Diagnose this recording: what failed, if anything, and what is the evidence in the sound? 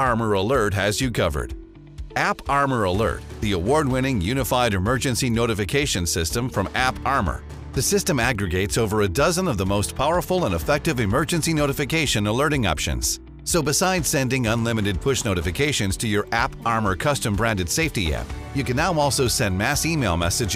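Nothing stood out on listening through this recording.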